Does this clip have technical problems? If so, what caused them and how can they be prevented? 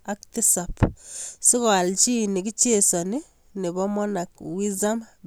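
No, the speech signal shows no technical problems, so there is nothing here that needs preventing.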